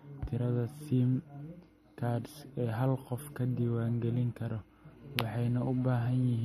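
Speech carries plainly audible MP3 compression throughout, likely from a low bitrate near 46 kbps: nothing above 13.9 kHz, plus swirly, flickering artefacts that a simple low-pass filter wouldn't produce.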